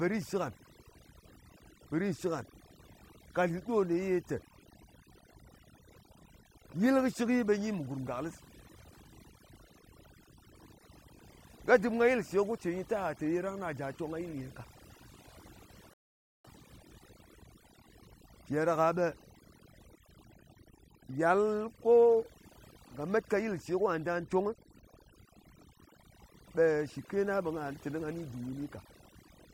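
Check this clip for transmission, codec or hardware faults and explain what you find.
Two faults are present: overdone noise removal across the whole recording, and one rebuffering stall.

The overdone noise removal runs throughout the speech. A noise reduction stage was pushed far too hard. It pulls individual frequency bands down or mutes them whenever they sit close to its noise estimate. Quiet parts of the voice fall below that line and vanish with the noise. The background drops, breaking up into small twinkling artefacts.

The rebuffering stall runs from 15.94 to 16.45 s. The player used up its downloaded audio and had to wait for more. Playback freezes into silence for about half a second, 0.51 s. It then picks up at exactly the point where it stopped. No speech is skipped. The pause simply adds that half second of dead air to the running time.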